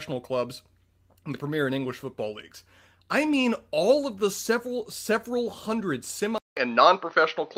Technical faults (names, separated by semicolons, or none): input switched to a poorer device